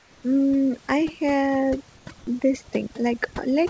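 Right from the start, 0.00 to 0.23 s, the background in the pause before the speech is a flat, featureless hiss, about 3 dB quieter than the real room noise, which sits about 33 dB below the speech. The same thing comes back in a short gap from 2.18 to 2.27 s, this time about 1 dB louder. That's comfort noise in place of the background, likely from the sender's voice detector switching off transmission and the far end filling the gap with synthetic noise.

Across the whole clip there's overdone noise removal. The suppressor is clamping down hard on any frequency band near its noise estimate, so the room noise gets pushed toward near silence with little twinkly specks left behind, and the quieter parts of the speech get eaten along with it. That all sits on top of the call path's G.722 band limit, with nothing above 8 kHz.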